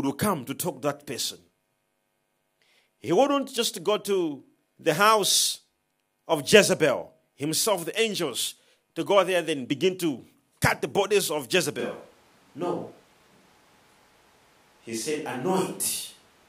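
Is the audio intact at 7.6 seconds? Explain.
Yes, the audio at 7.6 seconds is intact, with no fault to be heard at that moment.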